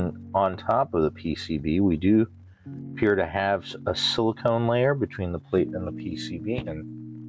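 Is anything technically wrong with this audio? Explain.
Yes. Gain pumping runs throughout. The gain swings by around 10 dB and ducks under each loud sound, likely from excessive gain hitting a fast limiter. On the waveform, the envelope looks flattened; the spectrogram's level rises and falls with each loud sound, and the band stops near 8 kHz from the call path.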